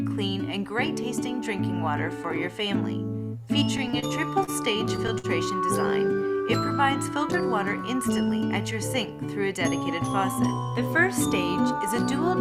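Late-arriving packets repeatedly emptied the jitter buffer from 3.77 to 4.50 s and again from 4.86 to 5.26 s, producing repeated stalls (stutter). The receiver stretched the last sound through each gap, the longest about 56 ms, so the audio drags and hiccups without losing content.

From 8.09 to 8.38 s the overfilled buffer triggered a jitter buffer speed-up. Short pitch-period pieces, roughly 40 ms in total, were cut out, so the sound runs about 11% fast at unchanged pitch and feels briefly hurried.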